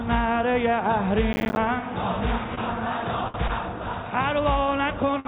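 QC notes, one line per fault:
1.33–1.57 s: processor overload crackle. A gritty burst of crackle comes from a rapid run of tiny silent gaps, as buffers of roughly 10 ms repeatedly missed their processing deadline.
2.55–2.59 s, 3.28–3.36 s, 5.20–5.27 s: short stall from a late packet. The sound is briefly held and smeared for 24, 63 and 56 ms while the jitter buffer stretched audio waiting for delayed packets. Nothing is lost.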